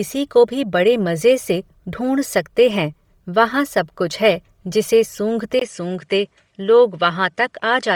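Bluetooth LC3 compression runs through the whole of this speech recording. Heavy codec damage gives the voice a grainy, breathy edge, with noise-filled upper bands in 10 ms frames, which fits LC3 at about 32 kbps, though the band still reaches 20.3 kHz. The input switched to a poorer device at 5.59 s, likely, just after "सब कुछ है जिसे". A 20 ms silence marks the switch, and then the top end stops at 10.5 kHz, dulling the sound, with a faint new noise floor far below the speech and no real change in loudness.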